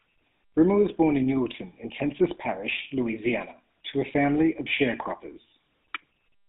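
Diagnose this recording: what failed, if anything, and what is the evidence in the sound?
The speech passes through the GSM full-rate codec for the whole recording, a codec-stage fault. The audio sits in a band of 150 Hz to 3.6 kHz. Underneath it runs a buzzy, gravelly roughness, which fits the 13 kbps full-rate coder. That coder models the vocal tract and drives it with a regular pulse excitation that keeps only every third sample. On a spectrogram you would see a hard ceiling at 3.6 kHz, empty space below 150 Hz, and coarse, grainy harmonics in the upper band.

A brief burst of GSM bit errors, a radio-link fault that reaches the decoder, lands from 1.84 to 1.89 s. It sounds like a short squawk and gargle, about 52 ms long. Corrupted bits in the filter, pitch or gain parameters make the decoder rebuild the wrong spectrum and level. On a spectrogram it appears as a blocky, misshapen patch whose length fits about three corrupted 20 ms frames.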